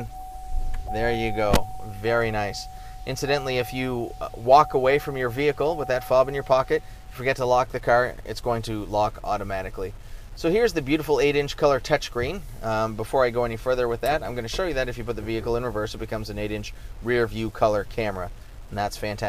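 Low bit depth without dither affects the audio from start to finish. The grainy distortion rises and falls with the sound itself, sitting roughly 30 dB below it, which fits an 8-bit signal that was most likely truncated rather than dithered. The quietest moments either drop to dead silence or sputter between two steps, and that signal-dependent texture is what separates it from ordinary background noise.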